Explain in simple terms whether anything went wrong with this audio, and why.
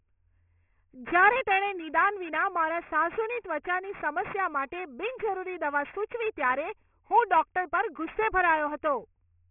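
Something went wrong for the whole clip: aliasing. The audio was squeezed down to a much lower sample rate, which fits a drop from 48 kHz to 6 kHz, without first removing the high sounds that rate can't hold. Everything above 3 kHz folds back down and lands at wrong, unrelated pitches. In this speech, the s and sh sounds turn gritty and metallic from start to finish.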